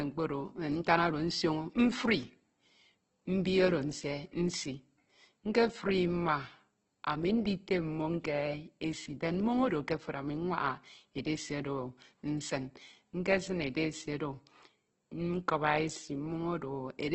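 From start to end, the speech is band-limited with nothing above 8.2 kHz, and it has a rough, grainy texture. Voiced sounds turn noisy and harsh rather than swirling, with no obvious spectral holes. This is heavy codec damage, likely from Opus compression in its music (CELT) mode. The encoder keeps each band's energy but fills starved bands with noise or folded lower content, which fits a very low rate around 12 kbps.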